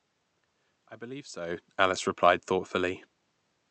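No technical faults can be heard in this speech.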